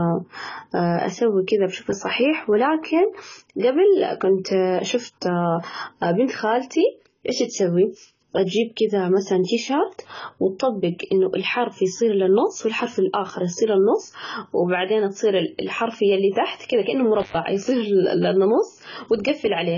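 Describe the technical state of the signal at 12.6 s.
At 12.6 s the speech sounds dull and heavily smeared, with a warbling, fizzy edge on sibilants and nothing above 7 kHz. This runs through the whole clip. The likely cause is AAC compression: AAC-LC quantising spectral lines too coarsely, which fits a very low bitrate around 16 kbps.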